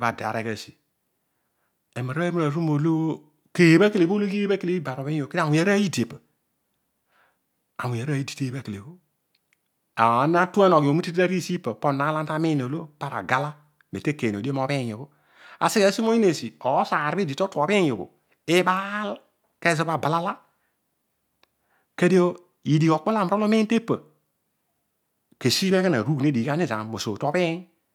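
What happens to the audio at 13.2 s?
Nothing goes wrong at 13.2 s; the speech there carries on intact, with no dropout, glitch or other fault.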